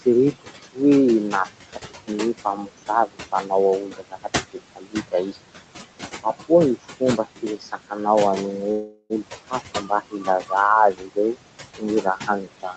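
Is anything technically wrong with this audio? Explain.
Yes. There are three faults.

Noise suppressor artifacts run through the whole clip. The suppressor judges, frame by frame, which frequency bands hold only steady noise and turns those down, here by about 17 dB. The room noise, sitting about 11 dB below the speech, is therefore pumped: it drops away in pauses and climbs back under each phrase.

Speech cut by the noise suppressor happens in four stretches: 0.01 to 0.79 s, 1.32 to 5.38 s, 6.23 to 7.97 s, and 9.25 s to the end. Here the suppressor mistakes quiet parts of the speech for noise and attenuates them with the background, by about 16 to 19 dB at the deepest. Soft consonants and word tails sound swallowed or faint. The damage adds up to roughly a second in the second stretch and less in the first and third.

A call audio freeze runs from 8.71 to 9.13 s. Packets were likely delayed in transit, so the jitter buffer emptied. 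The receiver bridged about 385 ms by extending the last sound as a fading buzz or hiss rather than dropping to silence. When the audio resumes it picks up exactly where it stopped, so nothing is lost, but everything after it arrives about 385 ms later. The band limit at 8 kHz fits a 32 kbps Opus call path.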